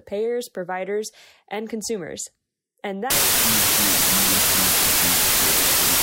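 From 3.10 s to the end of the clip, the speech turns into loud, harsh noise with a slowed version of the voice buried underneath. This is a wrong sample width fault, consistent with 32-bit samples being read as 16-bit. Each original sample is split into two values, and only the halves carrying the high-order bytes still follow the real waveform. The doubled sample count plays the audio at 0.5× speed, an octave lower in pitch.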